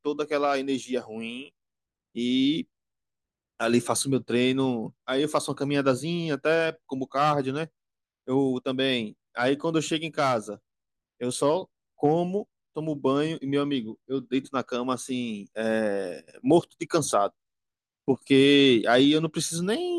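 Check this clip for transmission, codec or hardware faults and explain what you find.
No faults detected here.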